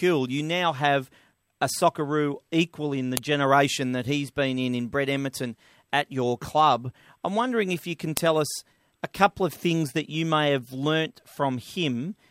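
Speech, with a sharp, loud click at 3.17 s and again at 8.17 s, exactly 5 s apart. That is a file header played as audio: the stream was joined from 5-second WAV pieces whose header bytes were left in and played back as samples.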